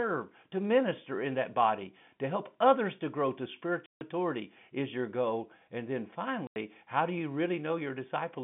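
Packets were lost in transit, and the receiver played silence in place of the missing audio, so this telephone-band speech, carried over G.711 coding limited to roughly 150 Hz to 3.5 kHz, has packet loss filled with silence. Two hard-edged holes cut the speech: a 150 ms dropout from 3.86 to 4.01 s and a 90 ms one from 6.47 to 6.56 s. Both lengths fit a 10 ms packet size.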